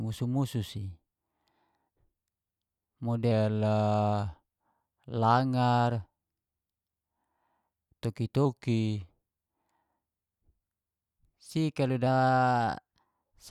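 From 3.31 to 5.12 s and 8.45 to 9.10 s, the speech slows by 6.4% and drops 115 cents. From 12.07 to 13.44 s it speeds up 6.4% and rises 108 cents. These drift correction steps, likely from clock matching, appear on a spectrogram as harmonics jumping abruptly, then snapping back.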